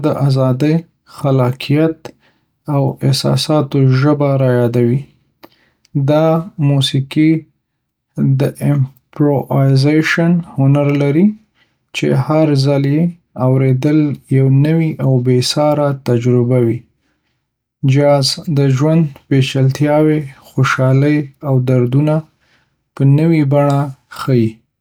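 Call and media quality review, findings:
No faults found: the speech signal is continuous and stable, with no dropouts, level disturbances or timing irregularities at any point.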